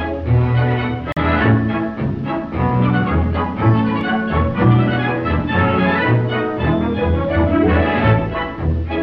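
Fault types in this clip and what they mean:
Bluetooth stall: At about 1.12 s the sound drops to complete silence for roughly 42 ms, ending near 1.17 s, then resumes. The likely cause is a wireless stall, where delayed packets let the headphones' buffer run empty so playback simply halts until data arrives again. Unlike a click or a codec glitch, there is no burst of noise or smeared, concealed audio, only a brief clean gap of true silence.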